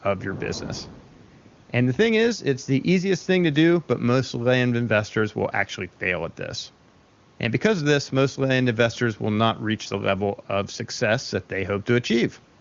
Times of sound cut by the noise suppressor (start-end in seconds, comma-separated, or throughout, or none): none